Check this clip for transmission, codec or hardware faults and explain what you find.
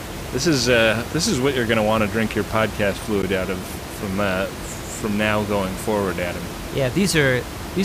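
One fault turns up in this speech clip: a block of digital silence at 3.22 s. The playback or processing chain likely failed to deliver a buffer of samples on time, so about 10.7 ms of output was filled with zeros, which fits a 512-sample buffer. The sound drops straight to silence and returns with no fade, so both edges are abrupt steps. Heard together, the two steps make a single tick or dip in the speech rather than an audible gap. The room noise, about 10 dB below the speech, is part of the recording and not a system fault.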